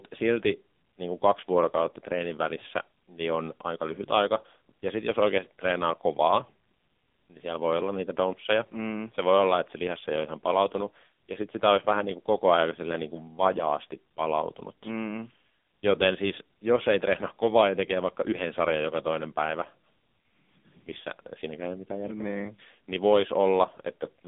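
Speech, coded through the AMR narrowband mobile codec for its whole length. Nothing passes above about 3.8 kHz, and the band sits near 200 Hz to 3.6 kHz. Heavy buzzy, synthetic damage points to a low mode near 6.7 kbps.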